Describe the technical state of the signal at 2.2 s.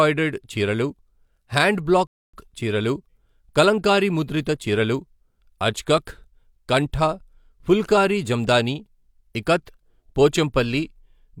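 At 2.2 s the speech drops into dead silence from 2.07 to 2.34 s, then picks up exactly where it broke off. This is a rebuffering stall: playback outran the downloaded audio and paused until more arrived, inserting about 0.27 s of silence without losing anything.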